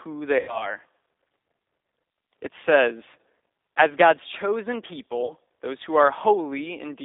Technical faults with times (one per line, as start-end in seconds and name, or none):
0.00-7.05 G.729 codec
0.39-0.77 VoIP packet loss concealed by the speech codec
5.25-5.33 VoIP packet loss concealed by the speech codec